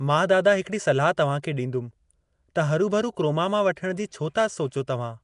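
From start to finish the speech carries a rough, hissy halo and a smeared, underwater feel, with nothing above about 10.6 kHz. That points to Nellymoser compression, likely Flash's Nellymoser Asao at around 44 kbps, where starved bands get filled with noise instead of real detail.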